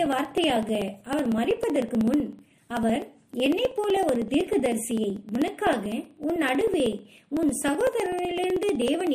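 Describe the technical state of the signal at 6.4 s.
At 6.4 s you're right in the middle of the periodic USB or driver dropouts that run from about 0.06 to 9.07 s. Every 0.063 s something stalls the driver and roughly a millisecond of audio is skipped, so you get a steady rapid ticking whenever there's signal.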